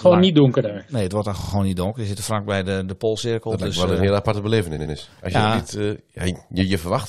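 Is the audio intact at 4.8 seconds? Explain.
No. Right after "eh een heel aparte", repeated frames from 4.77 to 4.94 s replay one 85.3 ms block twice more, a stutter that adds 170.7 ms instead of dropping audio.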